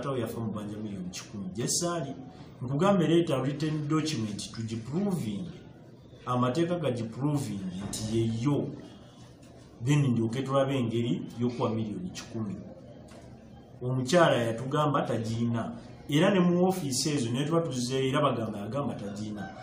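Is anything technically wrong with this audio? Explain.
No, nothing here stands out as a technical problem; it all sounds just as it should.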